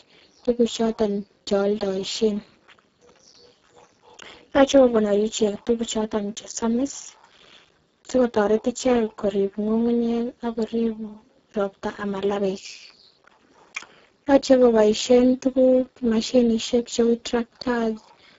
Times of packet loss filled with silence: none

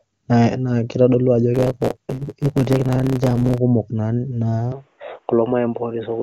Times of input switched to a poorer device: 4.72-6.23

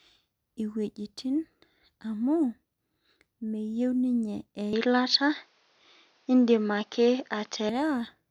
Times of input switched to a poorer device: 4.73-7.69

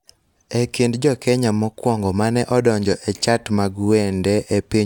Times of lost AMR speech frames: none

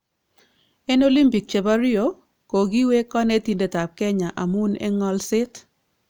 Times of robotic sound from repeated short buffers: none

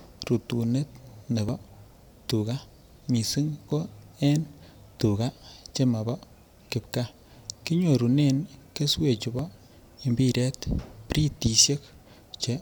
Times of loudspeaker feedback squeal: none

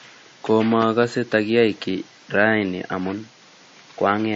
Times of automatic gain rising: none

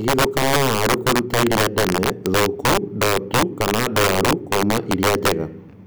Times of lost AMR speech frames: none

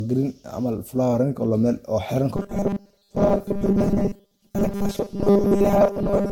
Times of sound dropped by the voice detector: none

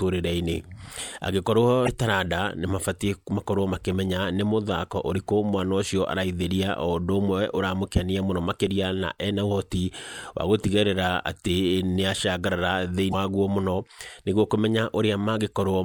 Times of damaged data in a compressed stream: 1.84-1.89, 13.10-13.14

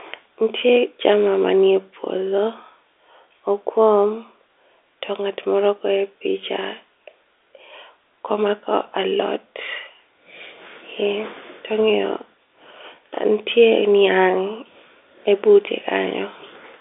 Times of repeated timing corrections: none

